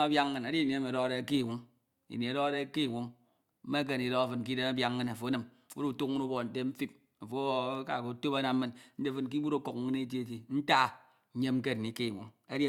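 Nothing technically wrong turns up anywhere in this short bit of speech; it's a fault-free recording as far as the ear can tell.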